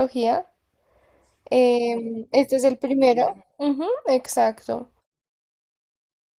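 Listening through the speech, nothing stood out as a technical problem at any point.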